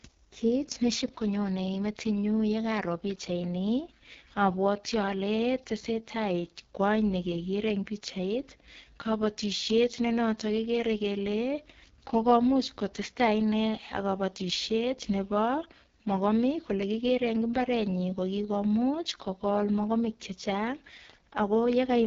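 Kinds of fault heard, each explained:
AMR wideband (HD Voice) codec: The speech has been squeezed through an AMR-WB encoder running at what sounds like its lowest rate, around 6.6 kbit/s. The codec rebuilds speech from a pulse-excited model of the vocal tract up to about 6.4 kHz and pads the band above with shaped noise, so nothing remains beyond roughly 7.1 kHz. At this rate the model has too few bits, and the voice comes out rough and raspy throughout the clip.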